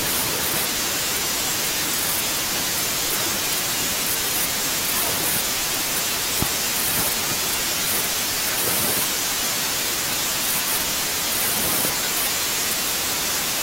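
At 6.42 s a single loud pop jumps well above the speech, likely a voltage spike from a plug or switch, while the talking continues underneath.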